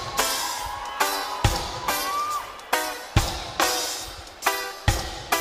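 No technical fault can be heard anywhere in the audio; the signal stays continuous and stable throughout.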